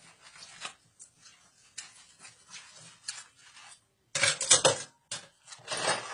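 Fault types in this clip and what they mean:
Transcoding between lossy codecs: the audio was likely encoded at a low AAC rate, then re-encoded as HE-AAC, layering both codecs' artefacts, with nothing above 11 kHz throughout.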